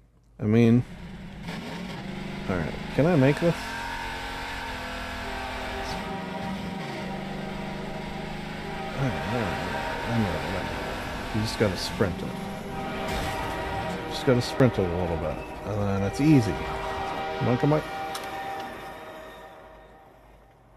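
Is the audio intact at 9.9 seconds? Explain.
Yes, the audio is intact at 9.9 seconds, with no dropout, click, distortion or other fault audible at that point.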